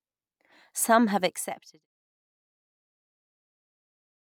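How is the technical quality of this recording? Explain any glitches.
Nothing stood out as a glitch on listening to this speech recording, and the level eases out smoothly, as an editor's fade would, from around 1 s to 1.87 s.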